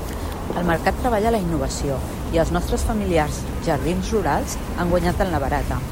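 A stuck bit runs through the whole speech clip, from start to finish. One data bit is likely held fixed, so roughly half the samples land on the wrong value by a small, constant step of about -45 dBFS. Because which samples are hit follows the waveform, the error rides on the speech as a grainy noise. In the pauses, tiny signal swings flip that bit's state, filling the gaps with a steady hiss.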